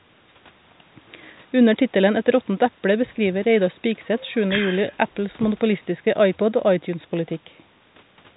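No faults are audible anywhere in this speech.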